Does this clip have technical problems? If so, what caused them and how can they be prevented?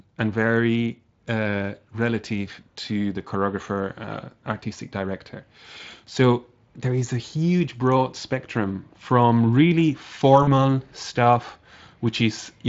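Yes. From 10.43 to 10.51 s there is VoIP packet loss concealed by the speech codec. About 40 ms of audio went missing, which fits two lost 20 ms frames. The Speex decoder filled the gap by repeating its last pitch and spectral shape at falling gain, so the sound smears into a brief buzzy tone or coloured noise that fades and recovers weakly rather than dropping to silence as a plain dropout would. A jitter buffer, forward error correction, or a less congested network path would prevent it.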